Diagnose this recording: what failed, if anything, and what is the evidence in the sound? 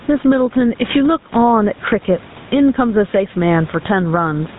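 In the call-processing stage, the gain is likely set far too high with a fast limiter clamping each loud syllable. Across the whole clip the room noise sits about 30 dB below the speech, and the gain swings around 10 dB.

At the codec stage, the speech runs through GSM full-rate coding throughout, consistent with a 13 kbps stream. Its pulse-driven vocal-tract model leaves a plainly audible buzzy, gravelly roughness, and the band stops hard at 3.8 kHz, so sibilants sound dull.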